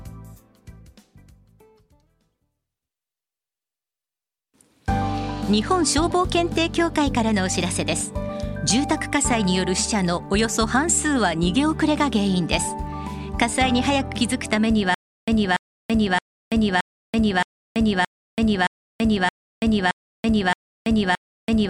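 From 14.94 s right through to the end, there's a stutter with silent gaps: a 288 ms burst keeps coming back about every 0.62 s, with 333 ms of dead digital silence between. It repeats 11 times, likely a stalled stream replaying its last fragment, so the audio that should follow is lost.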